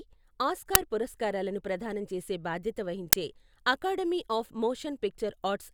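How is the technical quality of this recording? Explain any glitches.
The speech recording has two glitches, both an uninitialised buffer fault. At 0.75 s, just before "పురస్కారాలను ప్రదానం చేసే బాధ్యత", and again at 3.13 s, right after that same phrase, a block of about 5 ms, which fits a 256-sample buffer, played before any audio was written to it. Leftover memory came out as samples, giving a brief, loud crack. That loud crack distinguishes it from a dropout, which would leave a silent gap.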